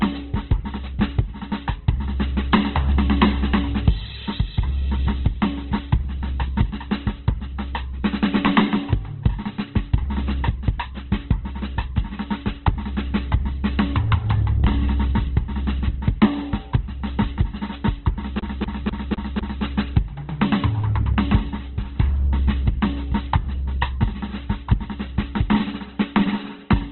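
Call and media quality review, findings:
Opus compression throughout the music. Likely an Opus encoder starved of bits in CELT mode, filling bands with noise and folded copies. Tones grainy and rough; nothing above 4.3 kHz, consistent with a bitrate near 12 kbps.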